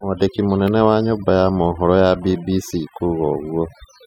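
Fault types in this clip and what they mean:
overdone noise removal: an over-aggressive noise reducer cuts bands near its noise estimate, leaving near-silent gaps with twinkling specks throughout.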